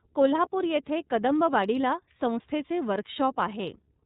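From start to finish, the speech passes through the iLBC codec. Its damage is plainly audible. Nothing above 4 kHz survives, so the sound is narrowband and muffled. The codec works in 30 ms blocks, which fits its 13.33 kbps mode. Each block's excitation is coded on its own, with no help from the block before. The low-rate coding leaves a slightly rough, synthetic texture. Consonants lose their crispness.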